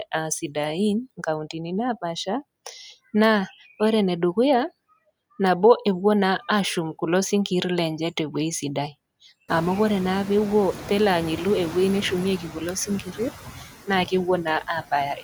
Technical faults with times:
0.00-15.24 noise suppressor artifacts
12.87-13.19 speech cut by the noise suppressor

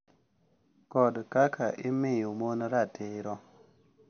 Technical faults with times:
0.00-4.10 MP3 compression

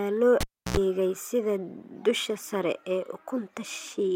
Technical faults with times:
0.40-0.77 cable pulled and plugged in

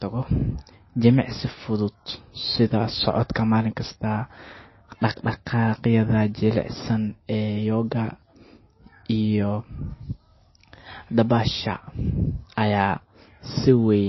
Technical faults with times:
0.00-14.08 MP3 compression

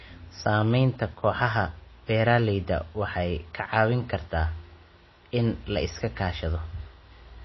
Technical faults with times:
0.00-7.45 MP3 compression

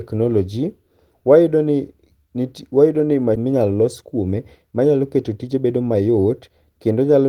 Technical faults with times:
3.35-3.37 skip ahead
3.45-6.90 jitter buffer speed-up

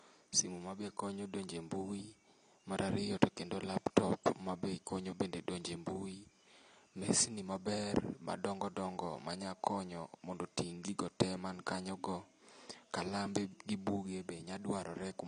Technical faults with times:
0.00-15.27 AAC compression

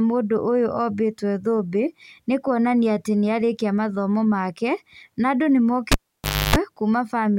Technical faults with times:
5.92-6.56 cable pulled and plugged in

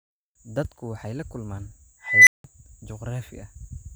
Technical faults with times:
2.03-2.44 unstable filter

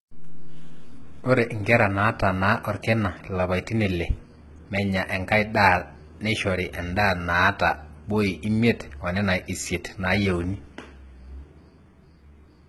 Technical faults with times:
0.00-12.68 HE-AAC compression

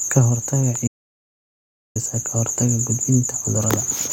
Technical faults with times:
0.75 electrical switching spike
0.88-1.96 audio dropout to silence

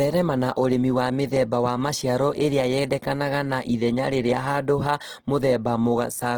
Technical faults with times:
0.00-6.37 Opus compression

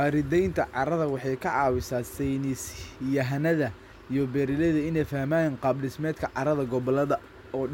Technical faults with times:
none

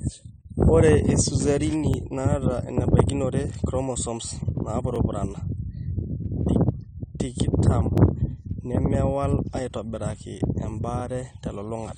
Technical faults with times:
0.00-11.98 AAC compression
1.94-1.96 overlapping chunks
4.96-4.98 overlapping chunks
7.98 overlapping chunks
11.00 overlapping chunks

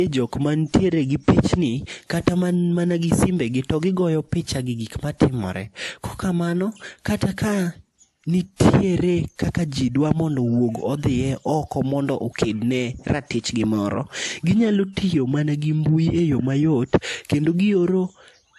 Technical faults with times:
0.00-18.59 transcoding between lossy codecs

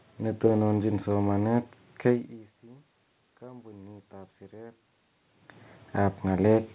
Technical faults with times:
2.61-4.83 automatic gain rising

